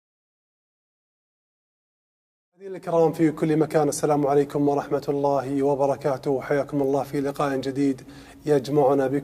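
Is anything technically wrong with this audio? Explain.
No, nothing technically wrong is audible here.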